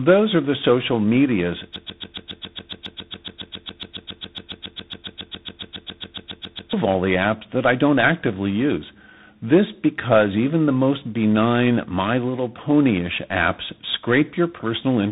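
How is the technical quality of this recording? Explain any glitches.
The technical quality is poor: the speech is band-limited and rough for the whole clip, and about five seconds near the start are lost to a stuck loop.

Tandem speech coding runs throughout. The call passed through G.726 at 24 kbit/s, G.711 A-law and CVSD, so each coder re-encoded the previous one's damage. The result sounds rough, gritty and noisy. On a spectrogram nothing appears above 3.8 kHz, and the harmonics look smeared and noisy.

A broken-record loop runs from 1.76 to 6.73 s, right after "are the social media's". A 138 ms fragment repeats back to back 36 times, likely because the player or stream stalled. Speech resumes at "all the apps that". The waveform shows identical blocks, and the spectrogram shows vertical stripes.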